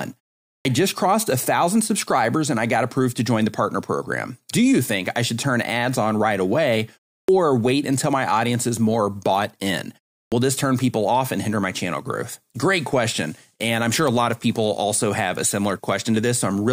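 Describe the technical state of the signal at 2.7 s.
At 2.7 s the speech signal is intact, with no fault present at that moment.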